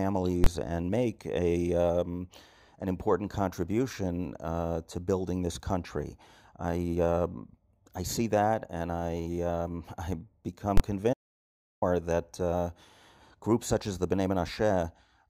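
A calculation produced invalid numbers that were clamped to full scale at 0.44 to 0.46 s, just before "and make a um", and again at 10.77 to 10.80 s. Each 23 ms block is pinned at maximum level, which fits a 1024-sample processing block, and is heard as a sharp, very loud bang. From 11.14 to 11.82 s the input was lost, likely through a disconnected device or failed link, while silence kept being written. This audio dropout to silence cuts the speech off abruptly for about 680 ms of total silence, without even room tone, before it resumes at "that uh".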